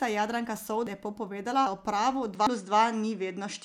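At 0.87 s and again at 1.67 s the speech jumps forward with no silence in between. Roughly a fifth of a second of audio is gone each time, and the two sides are butted straight together. This is audio missing between chunks, likely caused by a recorder working in 1.0 s blocks that drops a piece at each handover. That explains why the skips come every 0.8 s of heard audio. Unlike a network dropout, nothing is muted, and the timing is strictly regular.

From 2.35 s to the end, the input switched to a poorer device, likely a change to another microphone. Nothing comes through above 9.7 kHz, so the top end turns dull. The level shifts by about 5 dB, and a new noise floor appears about 50 dB below the signal. There is no gap at the change. What separates this from a simple low-pass filter is that tone, level and background all change at the same instant.

The chunk skips continue across the switch, with the next one at 2.47 s, just after the change in sound.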